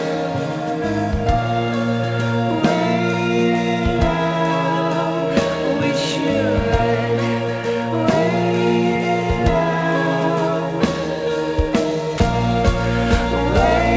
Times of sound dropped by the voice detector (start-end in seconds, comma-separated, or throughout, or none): 12.18-12.20